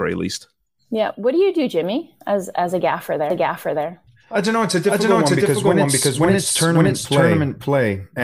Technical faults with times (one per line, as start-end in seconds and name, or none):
3.30-8.23 doubled audio track